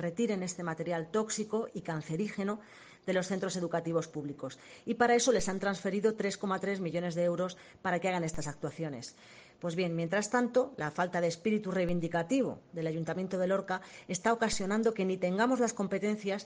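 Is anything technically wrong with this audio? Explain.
Yes. A DC step occurs four times, at 5.40, 8.34, 11.89 and 14.53 s: the waveform's zero line jumps by about -31 dBFS, then drains away through a 2 Hz high-pass, so each jump lands as a low thump while the sound continues unchanged.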